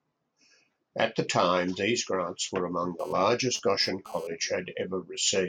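From 2.99 s to 4.27 s, GSM phone buzz cuts into the speech. A 2G handset close to the recording chain was sending data in short radio bursts, and some stage of the audio circuitry rectified those pulses, turning them into an audible signal. The result is a hard, raspy buzz repeating at about 217 Hz, thick with harmonics and unrelated to the speech, sitting about 23 dB below it. Since the phone was moving data rather than holding a call, the buzz arrives and stops rather than droning continuously.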